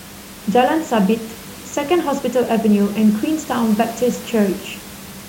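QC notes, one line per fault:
Nothing to flag on this speech clip, just the usual room noise sitting about 19 dB below the speaker.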